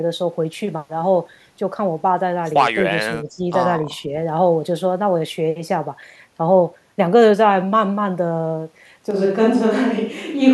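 From 2.82 to 3.41 s the speech dips by around 10 dB, then again from 3.85 to 4.1 s more mildly, by about 5 dB. This is likely speech suppressed in double talk: with both sides talking, the echo canceller mistook this talker for loudspeaker echo and pulled the level down.

From 9.11 s to the end the voice turns roomy and hollow, with less low end, while its loudness barely changes and faint room noise sits around 35 dB below the speech. The abrupt change points to a switch to a distant microphone after the close one dropped out.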